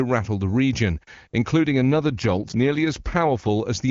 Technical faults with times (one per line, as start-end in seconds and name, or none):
1.71-3.49 AMR rate drop